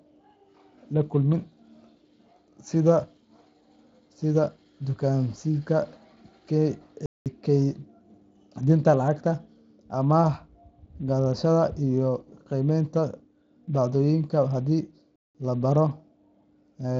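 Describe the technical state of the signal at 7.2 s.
At 7.2 s the speech falls silent in a playback stall running from 7.06 to 7.26 s, about 200 ms. The likely cause is the player running short of data or being blocked, so output halts mid-flow and then resumes. On a waveform this appears as a flat, near-silent stretch, and on a spectrogram as a blank vertical band cutting across the speech energy.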